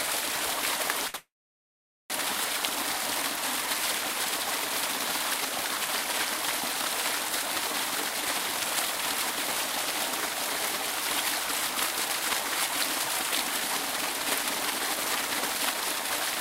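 At 1.07 s a short stall from a late packet holds the sound for 66 ms; the jitter buffer emptied briefly, and nothing is skipped, unlike a dropout. From 1.16 to 2.12 s a call audio freeze follows, likely from packets held up in transit. The last sound trails off and about 0.82 s of silence remains before the audio resumes where it stopped. That longer silent stretch is what separates it from the brief stall.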